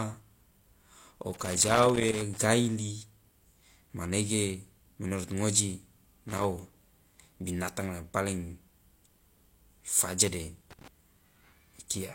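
At 1.34 to 2.38 s, again at 6.29 to 6.44 s and at 10.71 to 10.88 s, the speech is broken up by loose connector crackle. A worn or dirty contact in the signal path is making and breaking as it shifts, so the audio is chopped on and off in rapid, uneven succession. Each burst comes across as irregular scratching crackle; the first lasts about a second, the later two under 0.2 s each.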